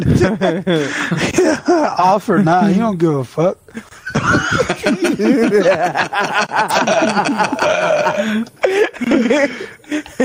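Gain pumping runs right through: the gain swings by about 10 dB under loud moments, likely a fast limiter reining in excessive input gain.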